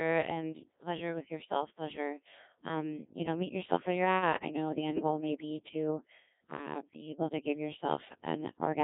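From start to end, the speech passes through a Codec 2 vocoder at a rate that fits roughly 1.6 kbit/s, transmitting only pitch, voicing and spectral shape and rebuilding the voice from sine waves. It sounds robotic and buzzy, heavily damaged, with nothing above 3.8 kHz.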